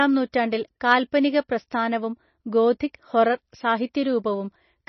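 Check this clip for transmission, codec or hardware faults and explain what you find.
Two codec faults are audible. Heavy MP3 compression runs through the whole speech clip. The audio has nothing above 6 kHz and sounds watery, with swirling, chirpy sibilants. Likely a starved encoder, which fits about 24 kbps, cutting the treble and dropping weak frequency lines frame by frame. At 2.79 s there is pre-echo. A hiss of about 11 ms leads a sharp attack, because block-wide quantisation noise leaks ahead of it and softens the onset.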